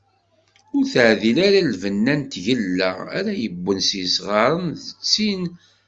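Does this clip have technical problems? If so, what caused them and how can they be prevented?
No, no technical faults detected.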